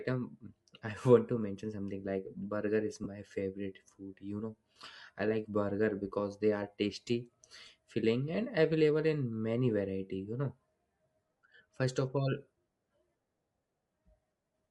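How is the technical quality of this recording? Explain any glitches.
The technical quality is compromised by continuous codec damage and two brief dropouts.

Throughout, the speech has a breathy, grainy upper edge. This is likely Bluetooth LC3 compression, which discards upper spectrum and fills it with noise, consistent with a moderate bitrate around 48 kbps.

Lost LE Audio frames occur twice. From 3.04 to 3.07 s, between "something like burger is" and "favorite food", a 20 ms gap fits two missing frames. At 4.72 to 4.76 s, just before "I like burger because", 40 ms is lost. In both places the decoder repeated the previous spectrum with scrambled phase, so the speech briefly turns into a noisy smear.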